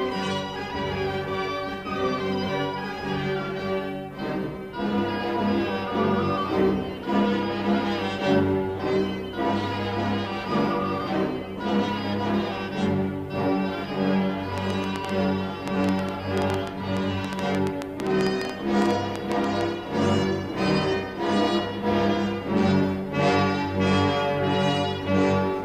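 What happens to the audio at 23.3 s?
Nothing goes wrong at 23.3 s; the audio plays through that moment intact, with no dropout, click or other fault.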